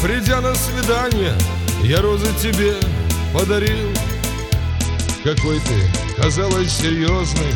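A Bluetooth SBC bit pool drop begins at 4.70 s and lasts to the end at 7.56 s: treble dulls abruptly and gritty quantisation noise rises, which fits the bit pool falling from 28 to about 9, near 78 kbps. Unlike a codec switch, the noise comes with the dulling.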